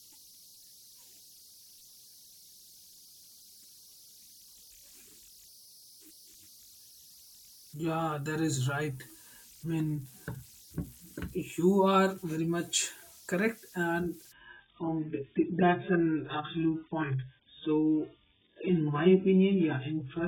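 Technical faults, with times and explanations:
Throughout: converter idle tones. An undithered delta-sigma converter settles into repeating bit patterns on low-level input, producing a whistle around 5 kHz in the pauses and grainy noise beneath quiet passages, sitting roughly 27 dB below the speech.
14.32 to 20.27 s: adaptive stream at a lower bitrate. The stream abruptly switched to a far leaner encoding, which fits a drop from about 96 to 8 kbit/s AAC, so nothing above 3.7 kHz survives; the speech turns dull and artefact-laden with no gap.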